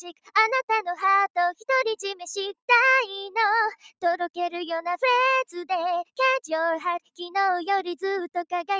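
A noise suppressor applied to music or sounds runs through the whole clip. It treats sustained and ambient content as noise and keeps pulling it down, so the level swings by around 5 dB as the processor changes its mind. Transients pass largely intact, but held material and decays sag, giving a pumping, fluttering, thinned-out texture. The band is capped at about 8 kHz, consistent with call microphone processing.

From 0.00 to 0.35 s, the sound is cut by the noise suppressor, dropping by about 18 dB at its deepest. The suppressor misreads the opening as background and attenuates it heavily, so the start sinks in level.

The same fault returns between 3.79 and 4.04 s, this time with a deepest drop of about 14 dB. The steady part of the sound dips audibly while sharper onsets come through.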